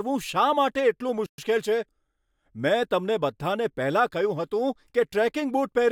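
At 1.26 s the speech cuts to silence for 120 ms, picking up again at 1.38 s. This is a playback stall, likely the player running dry or its thread being blocked. The waveform drops to a flat line, and the spectrogram shows a clean, full-height gap.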